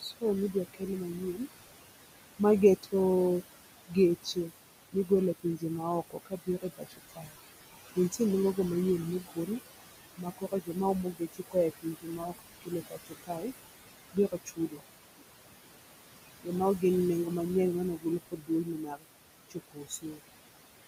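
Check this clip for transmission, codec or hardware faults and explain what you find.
The main problem is an over-eager noise suppressor, not a transmission, codec or hardware fault. It has two effects.

The first is noise suppressor artifacts, which run through the whole clip. The suppressor estimates the steady room noise, which sits only about 10 dB below the speech, and pulls those bands down by about 19 dB frame by frame. The background ducks away in the gaps and creeps back under the talking.

The second is speech cut by the noise suppressor. The suppressor mistakes some of the speech itself for noise. This happens in seven stretches: 0.0–2.94 s, 3.88–7.37 s, 9.22–9.49 s, 10.17–13.46 s, 14.13–14.82 s, 16.42–17.32 s and 17.95–20.29 s. Within them, soft consonants and word tails drop by up to about 15–22 dB, so they sound swallowed. The worst is around 10–13 s, where well over a second of material gets eaten.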